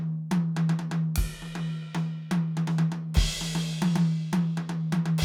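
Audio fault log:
No faults detected in the music at any point.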